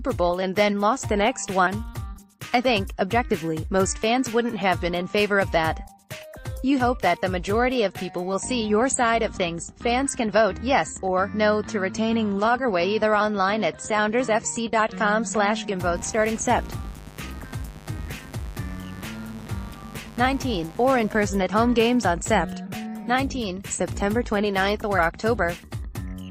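From 15.95 to 21.23 s, 50 Hz mains switching spikes leak in, causing mains buzz: a steady, raspy drone roughly 20 dB below the sound.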